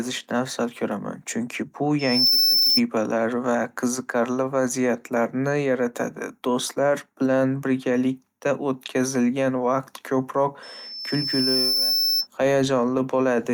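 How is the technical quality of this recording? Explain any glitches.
Two bursts of loudspeaker feedback squeal mar the speech. A piercing 5.3 kHz tone swells within a fraction of a second right after "afzal ko'raman chunki bu" (1.99–2.81 s), ending about 5 dB above the voice, then builds over about a second at 10.62–12.27 s to roughly speech level. The microphone is re-amplifying its own loudspeaker, and the loop runs away at that frequency.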